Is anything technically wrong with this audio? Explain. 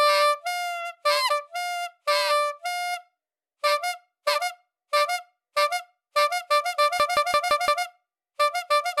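Yes. From 7.00 to 7.85 s there is a system hang loop: the playback stalled while the sound hardware kept replaying the same ring buffer, so one 171 ms slice repeats exactly five times at about 5.9 Hz, which fits an 8192-sample buffer. It sounds like a machine-gun stutter. Unlike a dropout or packet-loss glitch, nothing goes silent and hardly any audio is lost; each repeat is an identical copy of the same fragment.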